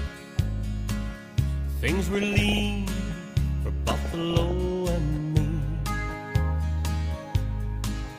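DAB burbling appears from 2.15 to 2.61 s and again from 3.88 to 4.51 s. Weak reception let bit errors of around one percent, then nearer one and a half percent, slip past error correction into the MP2 stream. Corrupted samples put short blips of noise into individual sub-bands, and corrupted scale factors make sub-bands leap in level for up to a frame, heard as brief noise blips and level jumps over the sound, a pattern that points to roughly twenty and then nearly thirty damaged frames.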